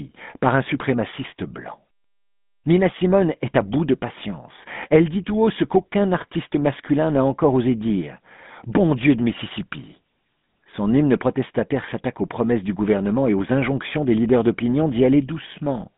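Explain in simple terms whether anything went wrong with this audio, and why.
The whole clip went through the GSM full-rate codec, an old phone coder, so the voice sounds buzzy and gravelly, and nothing above about 3.8 kHz gets through.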